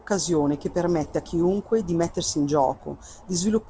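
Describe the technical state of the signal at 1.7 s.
At 1.7 s the speech is intact, with no dropout, glitch or distortion, and it carries the normal character of a wideband call codec, with nothing above 8 kHz.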